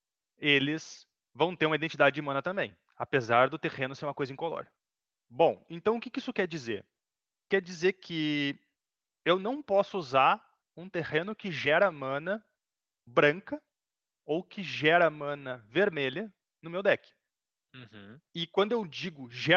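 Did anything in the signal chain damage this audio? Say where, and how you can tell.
No, nothing damaged it.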